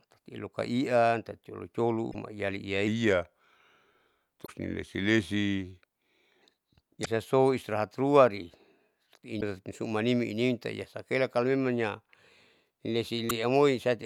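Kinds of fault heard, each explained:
Damaged data in a compressed stream: five short bursts where corrupted frames make the decoder lose its place and hunt for the next valid header, heard as a chirp, squawk, click or short hole, at 2.08, 4.43, 7.02, 9.37 and 13.26 s, each lasting 50 to 80 ms.
Section at the wrong speed: from 2.87 to 6.42 s the speech plays at 0.893 times its proper rate, likely from being fitted to the wrong clock, so it sounds slowed and about two semitones deeper, with pitch and tempo dropping together. This sets it apart from pitch shifting or time stretching, which change one without the other. The shift begins and ends abruptly, and one of the compressed-stream blips falls inside the slowed stretch.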